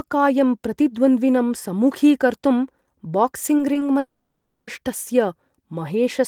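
A speech recording with network faults. Short concealed packet loss occurs at 3.57, 3.73 and 3.79 s: about 20 ms of audio arrived too late each time, and the receiver's patch leaves a brief smear or wobble. From 3.99 to 4.69 s the signal turns into a continued buzz or hiss that fades and ends in about 100 ms of silence before the audio returns with that stretch missing, likely a long network dropout.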